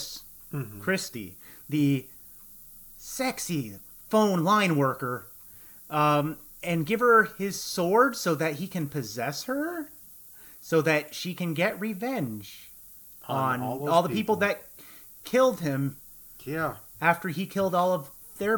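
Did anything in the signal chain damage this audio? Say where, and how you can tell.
Yes. The damage happened at sample-format conversion. Low bit depth with noise shaping is present throughout the speech: the signal was reduced to 8 bits and the rounding error was pushed upward, leaving a steady, thin hiss roughly 20 dB below the speech. On a spectrogram, the noise floor climbs steeply toward the top band.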